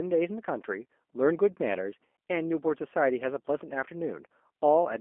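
From start to finish, the speech carries G.729 codec damage. The sound is rebuilt from a vocal tract model, pitch and sparse pulses, at a rate that fits 8 kbit/s. Only 250 Hz to 3.4 kHz survives. Voices sound thin, rough and plainly synthetic.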